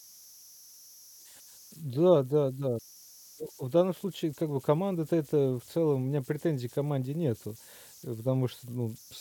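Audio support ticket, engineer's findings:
Converter idle tones through the whole clip: whistle around 5 kHz in the speech gaps, grainy hiss under quiet syllables, sitting about 26 dB below the signal. Probably an undithered delta-sigma converter locking into repeating bit patterns on low input. Worth checking dither settings.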